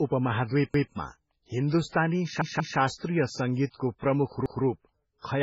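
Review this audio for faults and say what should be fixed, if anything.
The speech is band-limited throughout, with nothing above 7.6 kHz. Heavy swirly, watery smearing, metallic chirps on s sounds, and blurred consonant onsets come with it. This points to MP3 compression, likely at a very low bitrate around 16 kbps, where the encoder drops the treble and lets weak frequency lines flicker on and off between frames. A plain low-pass filter would dull the sound but leave no such warbling or chirps. Encoding at a much higher bitrate, or keeping the original uncompressed file, would prevent it.

There is a repeated buffer at three points. From 0.74 to 0.93 s a segment of about 186 ms plays twice. From 2.42 to 2.79 s, just before "सङ्गीतको प्रमुख", it plays three times. From 4.46 to 4.64 s, just after "सङ्गीतको प्रमुख", it plays twice. Each repeat meets the next at a hard join, and the segment length fits an 8192-sample buffer. 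The device replayed its last block because new audio arrived late. Unlike an echo, each copy is identical in level and joins the next without decay, and unlike a dropout, nothing falls silent. A larger or better-fed playback buffer would stop the underruns.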